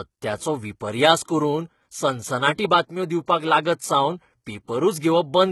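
From the first moment, the speech carries the sound of HE-AAC compression, with heavy codec damage. Nothing remains above 11.8 kHz. The top band is not the original treble. It is rebuilt from lower bands and shaped only roughly, so its harmonics do not line up with those below. Sibilants come out gritty, metallic or lispy. The damage fits a low bitrate near 16 kbps.

Clock slip clicks start at 0.12 s and run to 5.48 s. They are regular ticks about every 0.07 s, roughly a hundred in all. Each one is a single sample dropped or repeated. The likely cause is two devices running on separate clocks with nothing to lock them, drifting apart by around 400 ppm. They stand out most on loud, sustained sounds.

Pre-echo appears at 2.57 s. A short hiss of about 14 ms comes just before a sharp attack, and the attack itself sounds soft and smeared. The codec spreads its quantisation noise across a whole block. 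Here the attack falls late in the block, so noise sized for the loud part also fills the quiet moment ahead of it.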